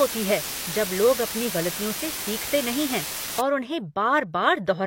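From 0 to 3.41 s, the speech carries a loud, steady hiss. This is low bit depth with dither. The signal has been reduced to very few amplitude steps, which fits a 4-bit word length. Random dither was added before rounding, so the rounding error becomes even white noise and not distortion. The hiss sits close to the speech level, only about 5 dB below it. It stays constant and unchanging throughout that span.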